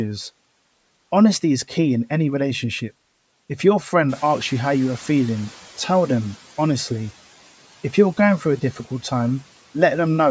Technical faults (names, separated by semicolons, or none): noise suppressor catching up